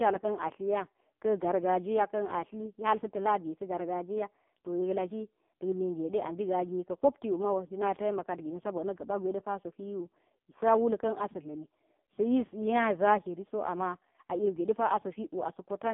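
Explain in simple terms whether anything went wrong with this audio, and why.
The whole recording sounds thin, muffled and buzzy, like a poor phone call, with a synthetic, robotic edge to the speech. That is the AMR narrowband mobile codec: it throws away everything above about 3.5 kHz and, squeezed this hard, rebuilds the voice crudely.

From 2.32 to 4.81 s, right after "jiya kan" and until "yek laki nak nige", the speech plays about 5% fast and almost a semitone higher, then snaps back to normal. This is likely a drift correction step, where clock-matching software briefly sped up playback to rebalance its buffer.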